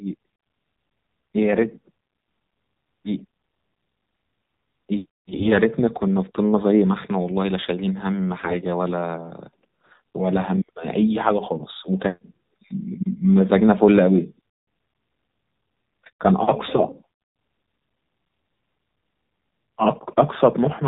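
The whole clip runs through the AMR narrowband mobile codec, and you can plainly hear it. Nothing gets through above 4 kHz, so the speech sounds boxed-in and phone-like. It also has that buzzy, slightly synthetic edge you get when the vocal-tract model is fed very few bits, which fits the lower end of the AMR-NB range at roughly 7.4 kbps. The codec rebuilds the voice from a handful of pulses per subframe.

Then there are two short bursts of AMR bit errors. The first runs from 5.32 to 5.52 s and fits about eight damaged 20 ms frames, with something like one bit in twenty flipped. The second, from 8.44 to 8.56 s, is shorter, around four frames, and a bit harsher at maybe 7 percent. In both, the frame checksum still passed, so the decoder trusted bad data: excitation pulses landed in the wrong spots and the finer pitch, gain and spectral values drifted. Pitch and loudness hold roughly steady, but the speech turns hoarse, scratchy and gargly for those moments.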